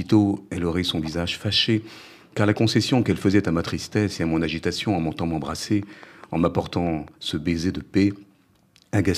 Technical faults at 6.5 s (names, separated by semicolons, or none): train of clicks